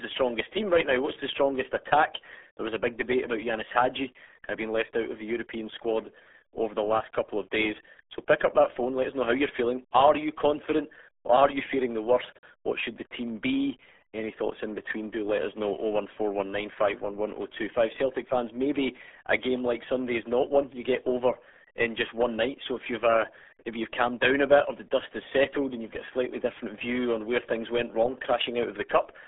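Speech heard through the RealAudio 14.4 codec from start to finish: the band sits near 300 Hz to 3.5 kHz, with nothing above 3.8 kHz, and it sounds muffled and gargly, consistent with an 8 kbit/s dial-up codec. That heavy gargly codec damage is what separates it from plain telephone band-limiting.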